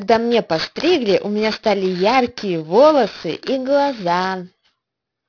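Aliasing runs through the whole speech recording. The spectrum stays hard and full right up to an edge at 5.5 kHz, which fits a drop from 16 kHz to 11 kHz without an anti-aliasing filter. Energy above that edge folds back as false, unrelated tones, roughly 15 dB below the speech, so sibilants sound gritty and metallic. Plain band-limiting would only dull them, and codec artefacts would swirl rather than add fixed mirrored tones.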